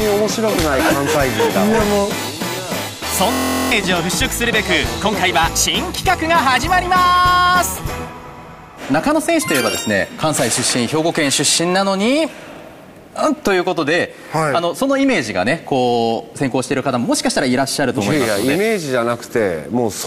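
From 3.32 to 3.72 s there's a system hang loop: the system froze and one 23.2 ms slice kept replaying, giving a steady 43.1 Hz buzz.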